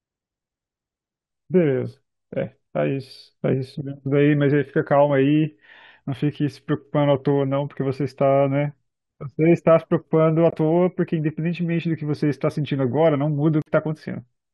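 At 10.51 s and again at 13.62 s the speech drops abruptly into silence, gaps of 40 ms and 60 ms, which fits 20 ms frames. This is corrupt frame muting: damaged compressed frames were rejected by the decoder and replaced with silence, without shifting the timing.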